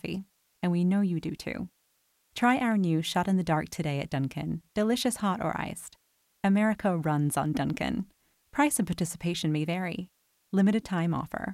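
The audio was quantized at low bit depth with dither, which fits about 10 bits, so the rounding error became a constant, even hiss roughly 45 dB below the signal throughout, without distortion.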